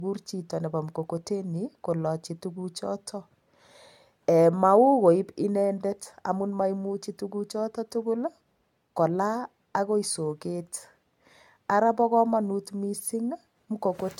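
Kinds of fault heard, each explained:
Generation loss: The speech sounds swirly, hollow and smeared, with blurred attacks throughout. This likely comes from about four rounds of AAC re-encoding, each around 96 kbit/s.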